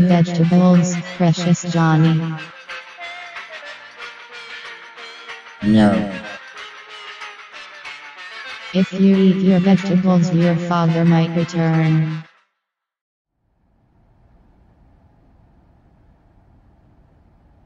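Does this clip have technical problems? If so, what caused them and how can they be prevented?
No, this clip has no technical problems, so there is nothing to prevent.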